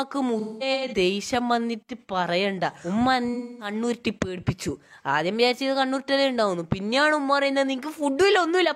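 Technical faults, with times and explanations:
0.39–0.93 s: AAC frame loss with concealment. About 340 ms of audio goes missing in bursts spread over half a second, which fits eight lost frames. The longest gap, about a fifth of a second, is bridged from the last good spectrum, so it sounds smeared and noisy rather than silent.
3.34–3.74 s: AAC frame loss with concealment. About 256 ms drops out, consistent with six lost frames. The decoder repeats and reshapes the previous spectrum with randomised phase, giving a brief phasey, washed-out patch.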